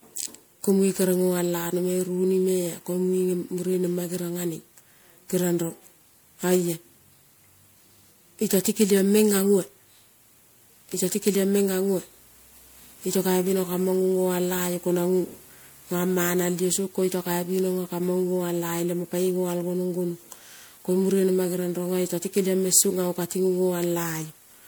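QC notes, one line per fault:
Throughout: generation loss. The speech has likely been decoded and re-encoded as MP3 at 128 kbit/s around seven times, each pass quantising on a shifted frame grid. The noise and spectral holes compound into a swirly, hollow smear, attacks blur, and nothing remains above 20.9 kHz.
0.79–4.39 s: timecode bleed. Linear timecode running at 23.976 frames per second leaks in from an adjacent track or cable. Its square wave flips between tones near 1 kHz and 2 kHz, producing a faint chirping warble about 40 dB below the speech.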